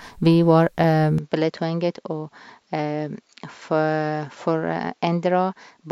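A speech recording with an abrupt change in sound at 1.18 s that lasts to the end. There is no gap at the change. From that point, nothing is heard above 7.6 kHz, so the voice turns duller and boxier. The level drops by about 5 dB. A faint new background noise sits far below the speech. This points to an input switched to a poorer device, likely another microphone or a headset's call profile.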